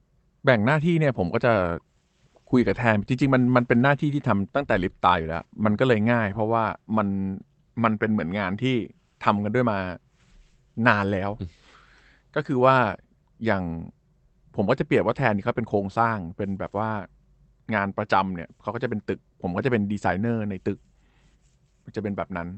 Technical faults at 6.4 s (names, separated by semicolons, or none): none